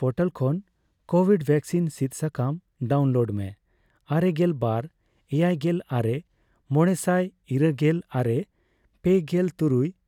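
There are no technical faults to describe at any point in this speech.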